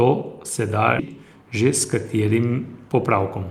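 Just after "se da", at 0.99 to 1.01 s, the speech jumps abruptly forward: a skip ahead that drops roughly 0.7 s of audio, the two sides joined with no gap. From 3.02 s to the end, a jitter buffer speed-up makes the speech run about 7% faster at unchanged pitch. The receiver trimmed a few tens of milliseconds of pitch-period pieces to shrink an overfull buffer.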